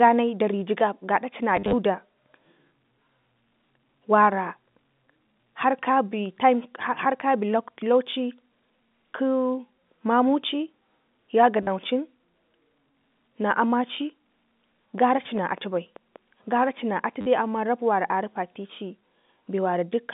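From 1.57 to 1.73 s, and again at 11.63–11.67 s and 17.21–17.26 s, packet loss with last packet repeated causes short robotic stutters. The receiver replays a stretch of audio. The repeats buzz near 100 Hz, which fits 10 ms packets, and show as copied waveform segments with vertical spectrogram lines. Between 14.98 and 16.17 s, a train of clicks ticks about seven times at a regular 5.1 per second, peaking near the speech level. It is likely interference from nearby equipment, and it shows as evenly spaced narrow spikes and full-height vertical stripes.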